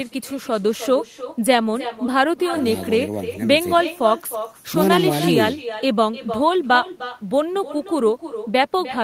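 Speech shadowed throughout by echo with no canceller: a thinner copy about 11 dB down repeats each phrase about a third of a second later. A distinct delayed repeat of the far-end loudspeaker sound, rather than smeared room reverberation, points to missing echo cancellation.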